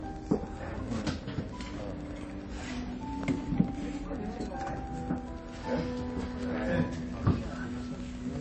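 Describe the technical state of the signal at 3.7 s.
At 3.7 s the signal carries Wi-Fi interference, present through the whole clip and so at this moment. A nearby radio's beacon bursts are being rectified by the audio circuit and appear as a steady tick every 102.4 ms, close to ten per second, sitting around 25 dB below the wanted sound. The pulse train is regular enough to read as mechanical clicking laid over the material.

The same moment shows plainly audible damage of the kind MP3 compression leaves, again running the full length of the clip. Nothing remains above 8.3 kHz, a hard treble cut-off that fits a starved encoder at a low bitrate around 32 kbps. Weak spectral components flicker in and out from one frame to the next, giving a watery, swirling texture, and transients lose their edge. The likely cause is a heavily compressed MP3 encode.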